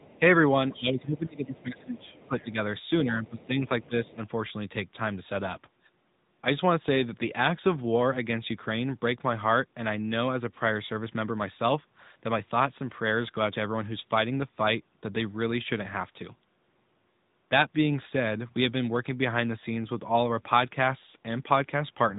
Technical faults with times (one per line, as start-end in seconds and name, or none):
0.00-22.19 AMR narrowband mobile codec
1.56-2.43 other side's voice leaking through